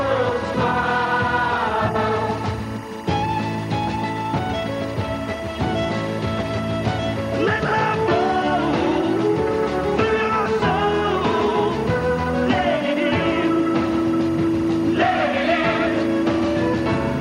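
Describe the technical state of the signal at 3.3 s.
Timecode bleed runs through 3.3 s and the whole clip: linear timecode at 23.976 frames per second leaks in, a square-wave chirp flipping around 1 and 2 kHz, roughly 20 dB below the sound.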